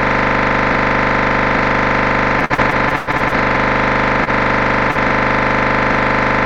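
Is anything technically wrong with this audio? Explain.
Yes, there are three network-related faults.

Repeated packet loss (robotic sound), from 2.39 s to 3.59 s: packets went missing or arrived too late again and again across this stretch, ten gaps in all, the longest about 115 ms. Each time, the receiver filled the hole by extending the last sound it had, so about 30% of this span is patched audio. Some 365 ms was filled in and 240 ms of real audio never arrived. The result is choppy sound with pieces missing.

Short stall from a late packet, at 4.24 s to 4.30 s: one packet was late, the jitter buffer emptied, and the receiver held the last sound for 26 ms until the packet turned up. Playback then resumed from the same point, so nothing is lost, but the delay grew by 26 ms. You hear a sound held a touch too long, with a faint buzz or dip.

Short concealed packet loss, at 4.91 s to 4.98 s: about 40 ms of audio never reached the decoder in time. 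The receiver covered the gap with 43 ms of sound continued from what came just before, then blended back into the real signal. It comes across as a brief smear or wobble.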